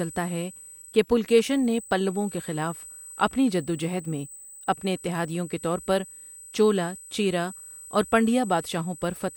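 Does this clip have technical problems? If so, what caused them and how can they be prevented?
Yes. A thin, steady whine at a fixed pitch of 8 kHz sits under the speech for the whole clip, around 20 dB below it, never drifting with what is said. This is USB whine: the bus pulls current in bursts every 125 microseconds, its microframe rate, and that ripple leaks through shared power or ground into the audio path, printing an 8 kHz tone onto the recording. Powering the interface separately, adding a ground-loop isolator, or using a USB isolator would prevent it.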